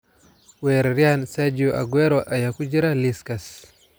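No technical faults are audible anywhere in the recording.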